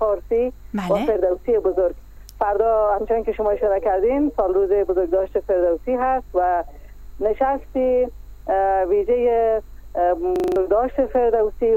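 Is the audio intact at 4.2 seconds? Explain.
Yes, the audio is intact at 4.2 seconds, with no dropout, click, distortion or other fault at that point.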